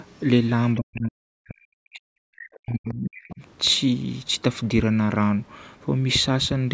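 Speech suppressed in double talk, from 0.78 to 2.29 s and again from 2.57 to 3.41 s: the speech dips deeply, by roughly 40 dB at worst. The likely cause is both sides talking at once, which led the echo canceller to turn down the near talker along with the loudspeaker echo. Overlapping that second dip, the other side's voice leaks through at 2.53 to 2.58 s, 2.88 to 2.94 s and 3.14 to 3.35 s. These are faint scraps, about 20 to 30 dB below the speech, most likely far-end audio that the echo canceller failed to remove from the microphone.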